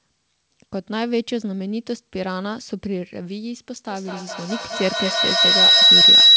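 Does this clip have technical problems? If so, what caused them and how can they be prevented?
Yes. From 3.85 s to the end, a piercing tone near 4 kHz swells and pulses about five times a second, peaking about 13 dB above the speech. This is feedback howl: two devices in one room share the call, and each loudspeaker-to-microphone trip adds gain until the loop rings. Muting all but one device in the room, or using headphones, prevents it.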